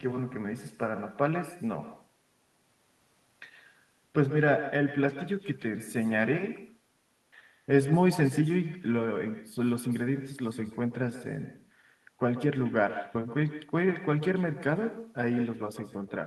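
Across the whole clip, the far end is playing the call through a loudspeaker that its microphone picks up, and with no echo canceller removing it, the speech returns after roughly 150 ms, about 13 dB quieter, as a thin shadow trailing every phrase.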